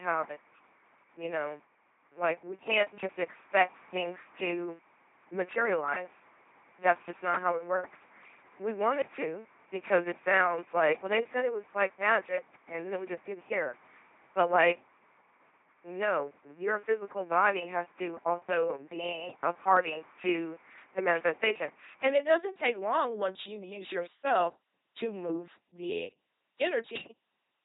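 Throughout, the speech carries heavy LPC-10 vocoder damage: a ten-pole filter excited by either a pulse train or noise, so every moment is forced fully voiced or unvoiced. It sounds buzzy and robotic, with misplaced buzz or hiss and nothing above 3.9 kHz, which fits a 2.4 kbit/s stream.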